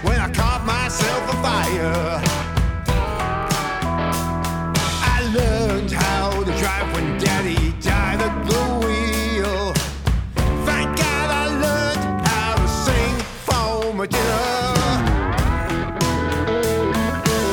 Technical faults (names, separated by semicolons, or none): none